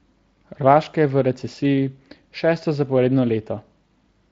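No technical faults turn up anywhere in the recording; the speech passes through a Speex codec at a setting high enough that its coding marks stay light, which fits a bitrate of roughly 24 kbps.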